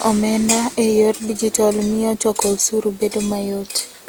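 Throughout the speech the sound is swirly, hollow and smeared, with blurred attacks: generation loss, likely from repeated lossy encoding, which fits about three passes through Opus at 48 kbit/s.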